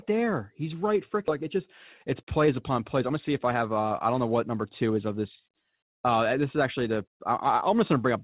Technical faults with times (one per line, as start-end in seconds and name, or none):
1.28-1.30 skip ahead
2.22-4.97 jitter buffer speed-up